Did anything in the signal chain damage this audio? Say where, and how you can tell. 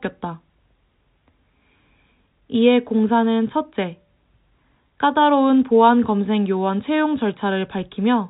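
No, the speech carries the 4 kHz band limit of G.711 telephone coding, consistent with a 64 kbps mu-law channel, and beyond that band edge the only trace of the codec is a faint quantisation noise that follows the signal's level.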